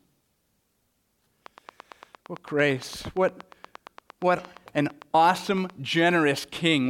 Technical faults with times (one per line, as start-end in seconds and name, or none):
1.46-5.71 train of clicks
5.11-5.15 Bluetooth stutter